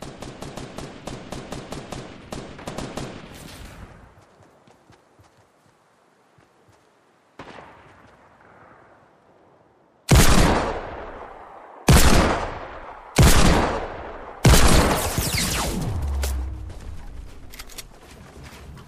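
At 2.68 s, 12.74 s and 17.49 s, compressed frames are skipped: the decoder loses whole frames of about 26.1 ms each, roughly two, one and three frames respectively. At each point the audio jumps ahead by the length of the frames left out.

At 17.68 s, a block of digital silence drops the signal to zero for 0.36 ms, which fits a 16-sample block left unfilled. The abrupt cut and return are heard as a tick or dip.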